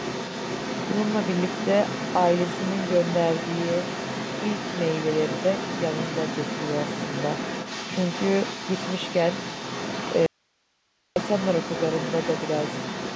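From the very start at 0.00 s right through to the end, there's other side's voice leaking through. A second voice sits underneath the main speech, roughly 10 dB below it. That's likely the far end playing out of the talker's loudspeaker and getting back into the mic because the echo canceller didn't fully take it out. It hangs around for the whole clip.

Then at 10.26 s there's an audio dropout to a faint residue. The speech just cuts out for about 0.9 s, up to 11.16 s, and comes straight back in mid-flow. In the gap you only get a low bed of hiss, something like 45 dB down, so the line clearly stayed open while the actual signal vanished, most likely lost somewhere upstream. It's a hard switch, nothing like a natural pause or a fade.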